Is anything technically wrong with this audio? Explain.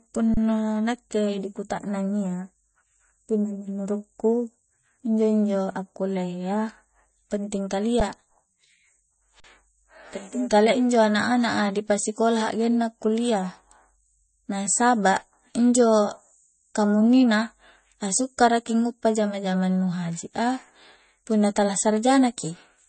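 Yes. The speech carries MP3 compression damage from start to finish, and the playback stalls three times.

The compression is plainly audible. Nothing survives above about 8.3 kHz, so the speech sounds dull and muffled. The artefacts point to a low bitrate, likely around 32 kbps. At that rate the encoder cuts the treble hard. It also drops weak frequency detail, which then flickers in and out between frames. The result is a watery, swirling texture, with chirpy s sounds and softened consonant attacks.

The underruns with held sample fall at 0.34 s (30 ms), 8.0 s (10 ms) and 9.4 s (40 ms). Each time, the output buffer ran dry. The converter held its last value until data arrived again. The waveform flattens and the sound briefly freezes into silence. Playback then resumes exactly where it stopped, with essentially nothing skipped. So each gap is a short hitch with at most a soft edge, not a sharp click.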